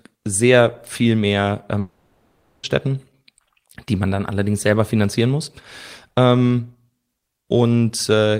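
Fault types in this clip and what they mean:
Long network dropout: from 1.79 to 2.65 s, just after "sehr viel mehr", the sound gives way to a fading buzzy continuation for the full 0.84 s, never reaching silence, then resumes with that stretch gone, likely because no audio packets arrived and the receiver filled the gap.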